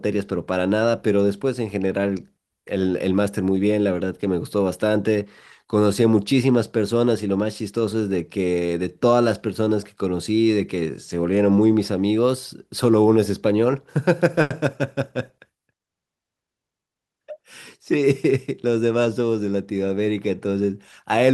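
At 14.41 to 14.51 s one speech sound is held unnaturally long, then resumes where it left off. This is a short stall from a late packet: the jitter buffer ran empty, so the receiver stretched that sound by 90 ms, losing nothing but shifting everything after 90 ms later.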